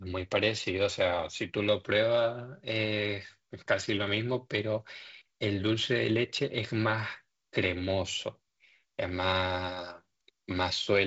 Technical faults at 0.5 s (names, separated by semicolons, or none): none